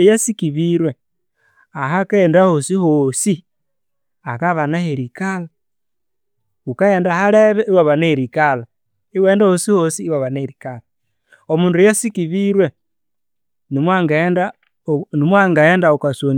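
A recording of speech, with no technical fault to be heard anywhere in it. Nothing in the audio calls for a time, a cause or a correction.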